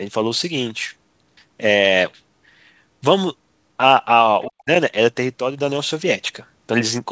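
At 4.44 s the echo canceller most likely failed to fully remove the far end's loudspeaker sound from the microphone signal, so for a brief moment, to 4.5 s, the other side's voice leaks through. It sits at about 20 dB below the talker's speech: a faint scrap of a second voice under the main one. Like the rest of the audio, it stops at 8 kHz, the band limit of the G.722 call path.

Overlapping that, from 4.48 s to 4.7 s, the speech is suppressed in double talk. With both sides active at once, the echo canceller likely could not tell the near-end talker from the residual echo and pulled the whole signal down. The drop reaches roughly 40 dB at its deepest, and about 150 ms in total is affected. The talker's speech dips sharply.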